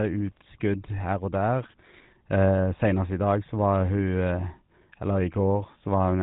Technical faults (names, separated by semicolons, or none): GSM full-rate codec